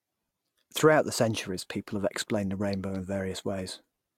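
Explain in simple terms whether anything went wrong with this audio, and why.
Nothing went wrong here: the speech comes across as recorded, with no technical faults audible anywhere in the clip.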